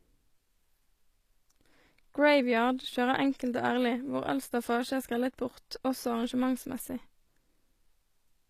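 Throughout, the speech was most likely encoded as HE-AAC at a low bitrate, the sound fitting roughly 24 kb/s. Upper bands are rebuilt from copied lower ones, so sibilants turn gritty and metallic, with plainly audible codec damage and nothing above 14.9 kHz.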